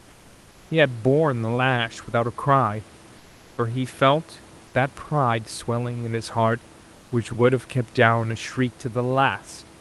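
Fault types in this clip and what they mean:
Comfort noise in place of the background: From 0.0 to 0.69 s and again from 3.17 to 3.57 s, the room background gives way to a smooth, even hiss. This hiss sits about 30 dB below the loudest speech. It is about 2 dB quieter than the real background. The detail of the room is gone until speech resumes. The sender likely stopped transmitting during these pauses under Opus discontinuous transmission, and the receiver generated noise to fill them.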